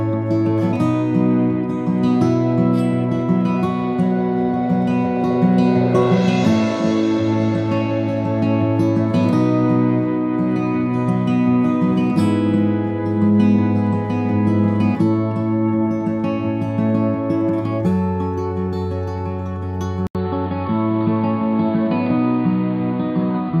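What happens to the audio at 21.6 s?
At 21.6 s you're in a dull, boxy stretch from 20.07 s to the end: likely an input switched to a poorer device, cutting everything above 4.8 kHz after an 80 ms gap.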